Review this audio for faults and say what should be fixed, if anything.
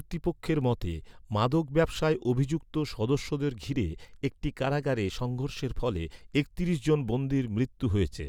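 No faults found in this speech; nothing needs fixing.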